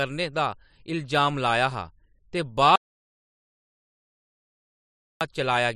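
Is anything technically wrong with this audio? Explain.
Yes. From 2.76 s to 5.21 s the speech cuts out abruptly and about 2.45 s passes in silence, with no room tone, before the sound returns. This is an audio dropout to silence, likely from the input being lost while the recorder kept writing zeros.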